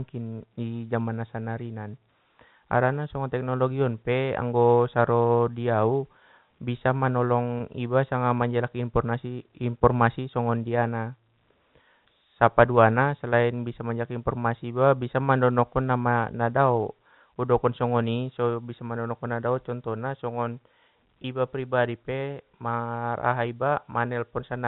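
Packet loss with pitch repetition occurs twice, at 7.58 to 7.60 s, just before "iba sanga manjaliki", and at 21.22 to 21.24 s, between "mandonokkon nadao contohna songon" and "pribadi pe mar". Each gap lasts about 20 ms, which fits one lost packet. The receiver filled it by looping the last pitch cycle, so each spot sounds like a briefly held, faintly buzzy tone. The G.711 A-law telephone band carries the speech around both gaps.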